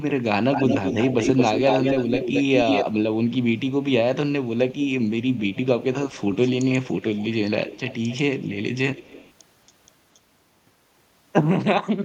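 Echo leak at 0.0–2.85, 3.27–3.73, 4.45–5.66, 6.06–7.29, 7.67–9.33, 9.66 and 10.14 s: speech returns delayed 222 ms, then 276 ms from 6.06 s, likely an echo canceller missing loudspeaker pickup. It is as loud as the speech at first, then 15 to 35 dB below it.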